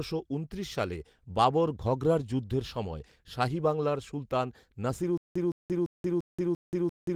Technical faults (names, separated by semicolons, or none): stutter with silent gaps